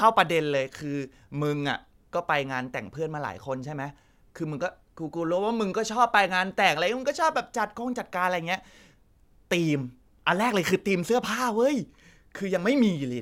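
Nothing technically wrong turns up anywhere in this bit of speech, so there's no problem here to time or trace back to a cause.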